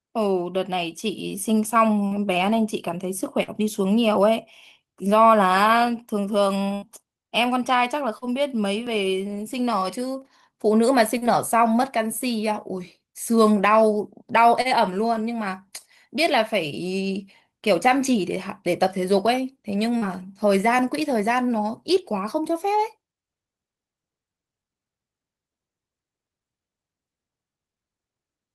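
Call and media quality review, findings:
Short concealed packet loss at 2.07, 3.43, 8.18, 11.18, 14.61 and 19.98 s: brief smear or wobble where about 40 ms of the stream never arrived in time and the jitter buffer synthesized a continuation, then cross-faded back. At 3.43 s, 15 ms was also trimmed to close the gap. Unlike an overrun, the hole is filled and the sound does not jump.

Burst of packet loss at 6.74 to 6.85 s: about 80 ms of consecutive packets lost, so the receiver held the last sound as a buzz or hiss that decays, then resumed further on with that stretch missing. It is longer than the short fills.

Dropped buffer (overrun) at 8.87 s: a tiny forward jump in the sound, no fill and no decay. Only a millisecond or two is skipped. This is likely a capture-side overrun that let the hardware overwrite unread samples, not a network loss.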